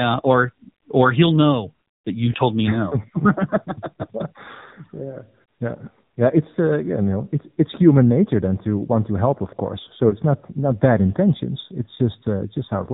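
Throughout, the speech carries plainly audible damage from the AMR narrowband mobile codec, with a buzzy, synthetic timbre that fits the 7.4 kbps mode. On a spectrogram, nothing appears above 4 kHz, and harmonics look smeared and blocky in 20 ms steps.

From 2.32 to 2.35 s, and again from 10.10 to 10.15 s, there are lost AMR speech frames. Each gap points to one missing 20 ms frame that the decoder bridged by repeating the previous pitch and vocal-tract settings at lower gain. Each one is heard as a short warbling dip. The waveform shows a brief sag in amplitude, and the spectrogram shows a smeared, repeated patch.

From 2.70 s to the end, a channel delay causes comb filtering. One channel lags the other by a small fraction of a millisecond, and the two are summed. Their common content cancels in a fixed notch around 3 kHz, so the speech sounds hollow and phasey. On a spectrogram, this appears as a steady dark horizontal band.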